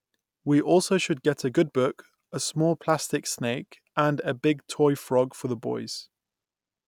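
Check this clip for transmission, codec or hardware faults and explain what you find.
Nothing to flag here: the speech comes across without any faults from transmission, encoding or the hardware along the way.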